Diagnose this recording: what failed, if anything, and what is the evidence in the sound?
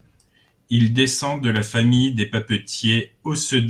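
Nothing failed in this recording, and there is no fault evidence in the sound.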